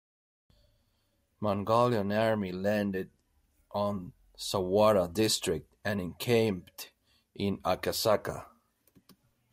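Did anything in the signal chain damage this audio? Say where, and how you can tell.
No, nothing damaged this audio.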